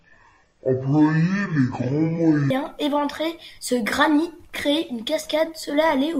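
From 0.0 to 2.5 s, stereo read as mono: alternating left and right samples are taken as one channel, so the speech runs at half speed, 12 semitones low, until "éventrer ce granit créer". A spectrogram shows compressed, low harmonics with a faint mirrored copy in the upper half.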